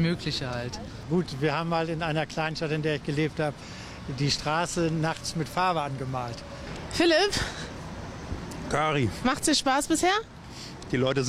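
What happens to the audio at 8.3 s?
Nothing goes wrong at 8.3 s; the audio plays through that moment without any dropout, glitch or other audible fault.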